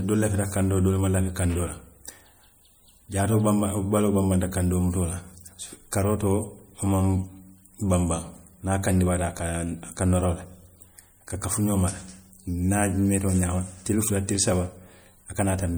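MP3 compression damage runs through the entire speech clip, from start to finish, and is plainly audible. The sound has a watery, swirling texture, and s sounds turn metallic. The likely cause is an MP3 encoder working at a bitrate that fits roughly 64 kbps. It runs short of bits, so weak frequency lines drop in and out from frame to frame. Content still reaches about 21.1 kHz, so the damage is in that unstable detail rather than in lost treble.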